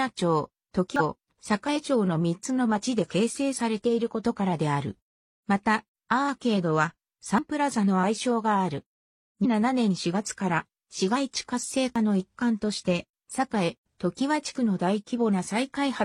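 A brief glitch breaks through the sound from 0.96 to 1.01 s, and the same blip returns from 9.41 to 9.46 s. Both point to damaged data in a compressed stream: corrupted bytes there are misread by the decoder, which loses frame sync and jumps ahead to the next header. In between, at 7.38 s, the sound skips forward abruptly, with about 40 ms gone and the two sides butted together. This is likely audio missing between chunks, dropped as one 5.0 s chunk closed and the next opened.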